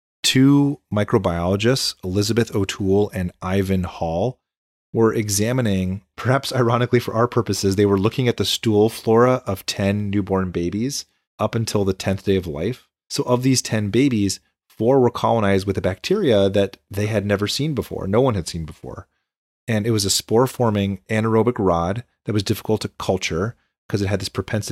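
Just after "seen before no one", from 18.38 to 19.24 s, the speech slows about 5% and drops nearly a semitone, then snaps back, likely a drift correction step.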